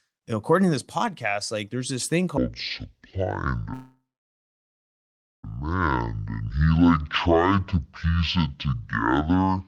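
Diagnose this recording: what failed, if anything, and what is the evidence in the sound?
From 2.37 s, right after "like there's this thing", to the end of the clip, the speech turns deep and dragging, playing at 0.528 times its recorded speed and about ten semitones lower. This is a section at the wrong speed, likely from playback or editing fitted to the wrong clock.

From 3.73 to 5.45 s the sound freezes, the last sound carrying on and fading, then drops to silence for about 1.4 s, then resumes where it stopped. This is a call audio freeze at the network stage: delayed packets likely drained the jitter buffer, inserting a 1.7 s gap with nothing lost.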